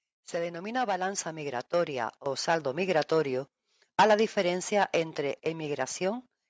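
From 0.31 to 2.92 s, automatic gain rising lifts the speech and background together by about 10 dB, a slow swell rather than a sudden jump.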